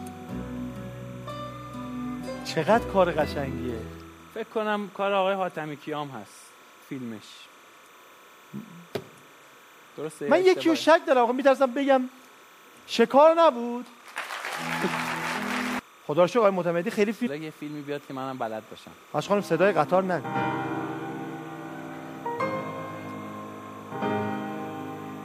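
Timecode bleed runs under the whole sound: a steady chirpy warble flipping between about 1 and 2 kHz, roughly 25 dB down, at a 29.97-frame rate from LTC leaking off a neighbouring track or cable.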